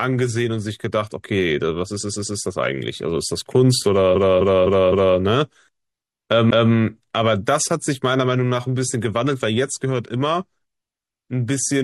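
Repeated frames: the same stretch of compressed speech was delivered more than once. At 1.98 to 2.37 s, a 128 ms block plays three extra times, and at 4.12 to 5.14 s, a 256 ms block plays four extra times. Each repeat is a stutter, and together they stretch the audio by about 1.4 s.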